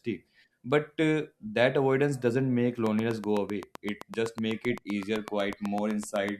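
From 2.87 to 6.3 s, a train of clicks, likely interference, ticks evenly about eight times a second. Its regular spacing separates it from random crackle.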